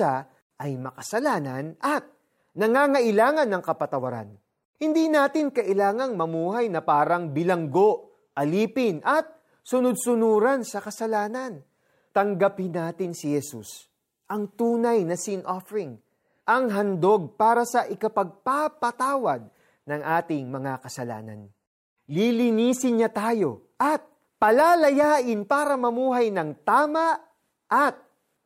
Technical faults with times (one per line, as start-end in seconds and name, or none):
none